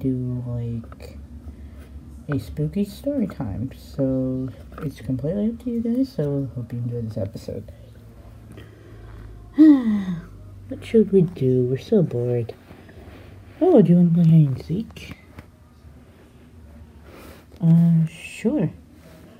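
Nothing here sounds technically off; the audio just runs along without any hiccups worth pointing out.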